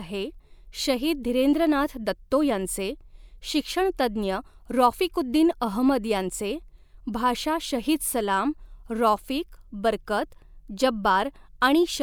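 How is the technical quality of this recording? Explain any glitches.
No glitches can be heard anywhere in the recording. The speech continues without any interruption or disturbance to point to.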